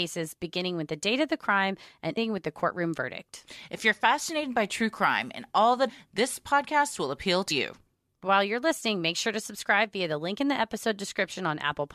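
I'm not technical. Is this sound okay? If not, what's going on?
No. There is damaged data in a compressed stream: at 2.16 s after "of the crime and", at 5.88 to 5.90 s after "crime and all that", and at 7.50 s after "this podcast will appeal", corrupted bits make the player lose its place and produce a brief glitch as it resyncs.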